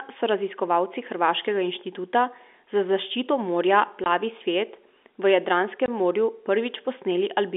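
At 4.04 to 4.06 s and again at 5.86 to 5.88 s, the speech drops to dead silence for a brief 20 ms. This is packet loss filled with silence: the receiver had nothing to play for that stretch and inserted zeros, and a gap that length fits a single lost 20 ms packet. The narrow telephone band of the G.711 line carries on unchanged around both gaps.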